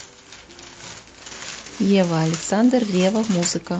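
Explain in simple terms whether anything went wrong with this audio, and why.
Nothing went wrong here: the speech comes through steady and intact, with no dropouts, glitches or distortion anywhere in the recording.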